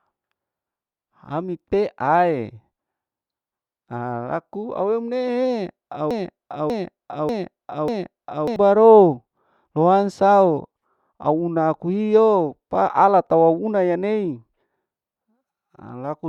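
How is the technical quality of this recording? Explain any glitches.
The recording has one clear fault, a broken-record loop from 6.11 to 8.56 s, right after "alaku awemneheee". The player or stream likely stalled and kept resending the last fragment still in its buffer instead of fresh audio. A 0.59 s slice of speech plays four times back to back with identical timing, giving a stuttering, stuck-needle repetition. The speech that should have filled those seconds is lost, so the sentence jumps ahead when normal playback resumes.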